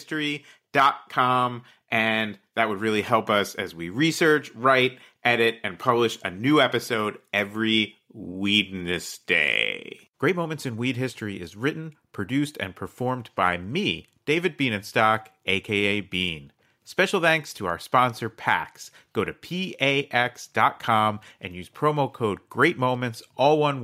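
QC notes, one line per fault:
No faults found on this speech clip.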